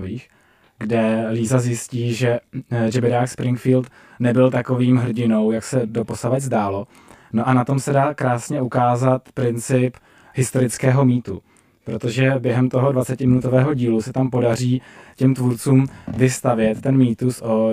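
Throughout the speech, the sound is rough and slightly doubled. The cause is channel delay (comb filtering): one channel trails the other by roughly 20 ms. Summing them to mono cancels evenly spaced frequencies, with the first notch around 20 Hz.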